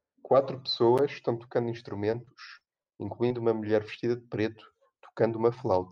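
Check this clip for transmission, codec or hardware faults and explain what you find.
One transmission fault shows up, a burst of repeated packet loss with the robotic sound that goes with it. From 2.11 to 3.36 s the speech keeps dropping out in short holes, the longest around 40 ms, and each one gets papered over by stretching the last bit of sound forward. Around 150 ms is rebuilt that way, roughly 13% of the stretch, so the audio turns choppy, with small pieces missing.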